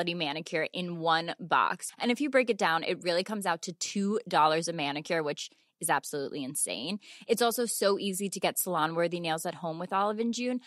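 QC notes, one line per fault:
Nothing to flag here; no faults turned up anywhere in this speech clip.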